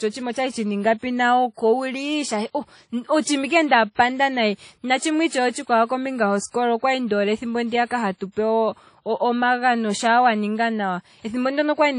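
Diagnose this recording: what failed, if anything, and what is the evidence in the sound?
Codec stage. All the way through, the speech carries two distinct kinds of lossy smearing layered together, with nothing above 10.1 kHz. That's transcoding between lossy codecs, likely a low-rate WMA encode redone as MP3, which spent bits on the old artefacts and kept the lowest cut-off.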